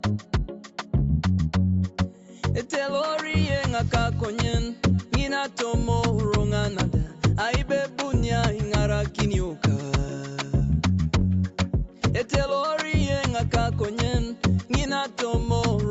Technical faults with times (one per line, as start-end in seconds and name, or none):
none